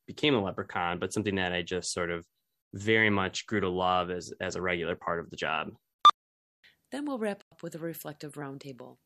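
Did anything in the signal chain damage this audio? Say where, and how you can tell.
Yes, a digital broadcast dropout in the reception stage. After "we'll wrap", the speech fades out within about 3 ms at 7.42 s and stays silent until 7.52 s, resuming at "with a". That 96 ms hole fits a few corrupted frames muted by the receiver, and their content is gone.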